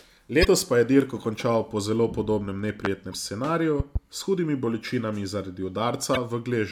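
A brief glitch at 0.41 to 0.45 s, just before "pa je dirko končal", is damaged data in a compressed stream: corrupted frames make the decoder lose sync and search for the next frame header. The same blip recurs at 3.10 to 3.14 s, after "končal po zelo podobnem", and at 6.13 to 6.17 s. Between these, a sharp loud pop roughly 20 dB above the speech lands at 2.85 to 2.88 s, likely from a voltage spike such as a switch or static discharge, and a pair of softer pops, about 10 dB up, follows at 3.80 to 3.99 s, with the speech carrying on beneath.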